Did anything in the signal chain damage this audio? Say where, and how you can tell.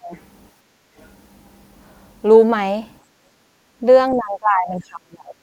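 Yes, and the damage happens in call processing, at the acoustic echo canceller.

Speech suppressed in double talk appears twice. From 0.00 to 0.13 s the talker's voice dips by roughly 25 dB, and from 4.16 s to the end it sinks by roughly 30 dB for about a second. On a waveform the envelope drops sharply in level. The likely cause is that the canceller could not tell the talker from loudspeaker echo while both sides were speaking, so it attenuated everything.

The other side's voice leaks through briefly, from 0.14 to 0.19 s and from 1.00 to 1.07 s. It is very faint, around 35 to 40 dB below the talker. A spectrogram would show weak formant traces that don't belong to the main talker. This is likely residual loudspeaker echo that the canceller failed to subtract from the microphone signal.

Background gated by the echo canceller shows up from 0.56 to 0.95 s and from 3.04 to 3.79 s. The room noise floor drops by about 10 dB and about 9 dB respectively, then recovers when the suppressor releases. 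On a spectrogram the broadband noise band darkens across all frequencies for those spans. On a waveform the low-level floor between utterances visibly narrows, the signature of hard microphone attenuation while the loudspeaker was active.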